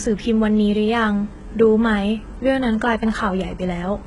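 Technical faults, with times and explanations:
Throughout, HE-AAC compression: sibilants sound gritty and metallic, with nothing above 11 kHz, likely from rebuilt treble at around 12 kbps, not a plain low-pass dullness.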